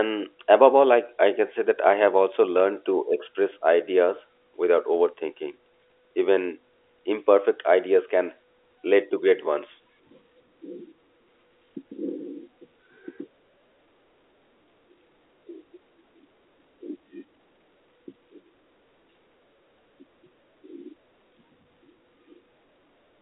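No technical fault can be heard anywhere in the speech. The sound carries the narrow band of a G.711 telephone line, roughly 300 Hz to 3.4 kHz, with nothing present above about 3.7 kHz.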